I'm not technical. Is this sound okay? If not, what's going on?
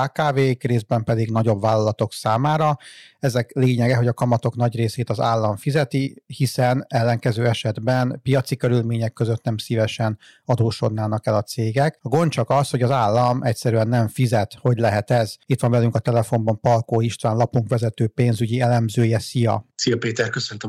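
No. All the way through this speech recording, the loudest moments have a crackle or roughness, as if the sound is briefly scratching at its limits. This is hard clipping. The recording was pushed slightly louder than the equipment could handle, so the tips of the loudest sound waves were sliced off flat. Only a small fraction of the sound is affected, which is why you hear crackle on peaks rather than constant harsh fuzz.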